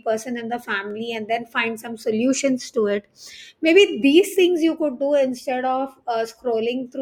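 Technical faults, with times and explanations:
0.91 s, dropped samples: the stream likely skipped a tiny run of samples, well under a millisecond, between "in the" and "and then find some", so the waveform leaps straight to a later value. Nothing audible is lost, but that jump makes one sharp click, a thin vertical line across the spectrum.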